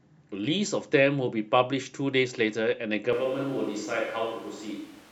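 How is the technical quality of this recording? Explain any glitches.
The recording has one fault. From 3.13 s to the end, the speech abruptly turns roomy and hollow with thinner bass, which points to a switch to a distant microphone, likely because the close microphone's feed dropped. The level barely changes, but room noise rises to roughly 25 dB below the speech.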